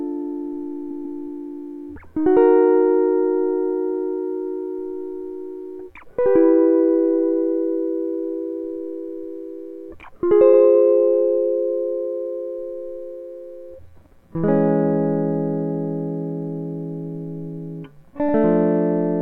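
At 0.90 s the music stutters as repeated frames replay a 144 ms block twice more, adding 288 ms. Shorter 48 ms repeats follow at 10.53 s and 18.28 s, each played once extra. Stored compressed frames were sent again, so the decoder plays identical material back to back. Unlike a dropout, nothing goes missing and no silence appears; unlike echo, each repeat is an exact copy at full level that lengthens the clip.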